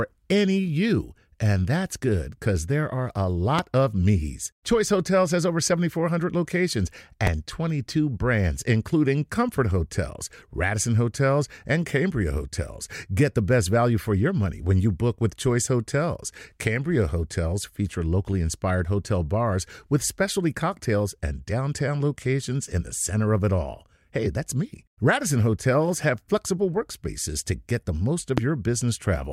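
A sharp single pop breaks through the speech three times, each lasting only a couple of hundredths of a second while the talking carries on beneath it: at 3.59–3.61 s, between "because there are a" and "of me's"; at 7.27–7.29 s; and at 28.38–28.40 s, just after "to get the most". The first two jump roughly 15 dB above the speech, the last roughly 20 dB. Each loud pop is likely a brief voltage spike, from a switch, static or a driver glitch, added to the signal.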